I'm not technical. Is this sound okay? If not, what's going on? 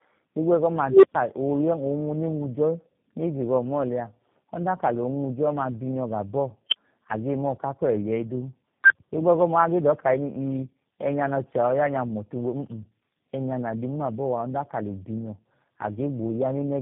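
No. At 0.87 s a low beep, roughly 400 Hz, swells to very loud in about 0.16 s, then the sound cuts out for 0.12 s until 1.15 s. That's an unstable filter: a sound-shaping stage fed bad settings, so its output ran away until it reset.

The speech is also muffled, rough and warbly all the way through, with nothing above 3.7 kHz. This is tandem speech coding: the call passed through three different phone-network speech compressors in a row, each squeezing the previous one's already-damaged result.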